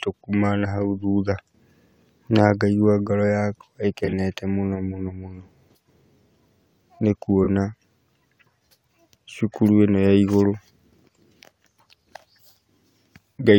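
At 4.05 to 4.13 s and again at 7.44 to 7.48 s, corrupt frame concealment covers spots where the decoder replaced damaged AAC frames, roughly three and two frames' worth.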